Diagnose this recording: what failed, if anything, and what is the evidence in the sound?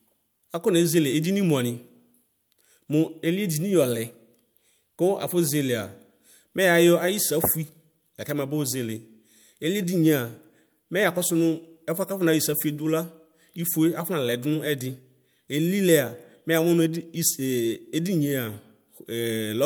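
Nothing failed; no faults heard.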